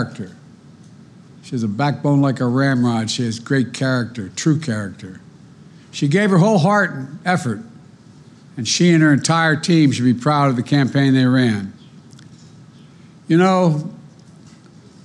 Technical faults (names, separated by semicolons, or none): none